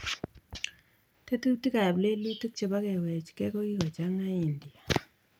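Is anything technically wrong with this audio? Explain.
No, nothing in this speech recording points to a technical problem.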